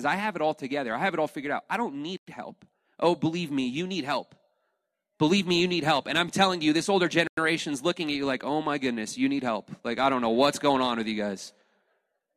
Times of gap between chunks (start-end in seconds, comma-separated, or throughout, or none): 2.17-2.27, 7.27-7.37